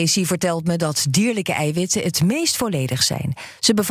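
Speech, with no technical fault audible anywhere in the recording.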